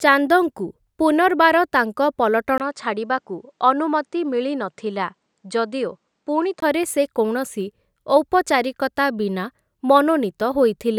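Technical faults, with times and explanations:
2.58 to 6.62 s, input switched to a poorer device: the sound dulls, losing everything above 9.2 kHz, after a 20 ms gap. A likely microphone change, with faint new noise about 50 dB below the speech, similar level.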